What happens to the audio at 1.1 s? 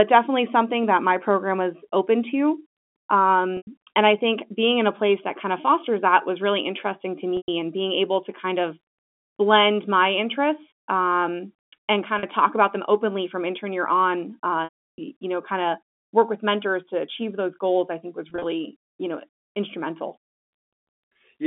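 Nothing goes wrong at 1.1 s: the speech carries on intact through that moment, with only the narrow, band-limited quality of its G.711 telephone coding.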